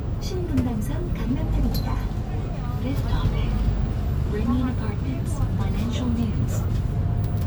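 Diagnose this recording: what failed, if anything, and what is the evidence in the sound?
Nothing failed; the recording shows no audible faults.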